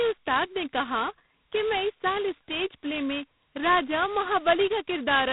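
From start to end, the speech carries heavy G.726 ADPCM damage. The coarse quantisation points to the 16 kbit/s mode. Nothing passes above 3.9 kHz. A harsh, rasping hiss rides on the speech and rises and falls with its level.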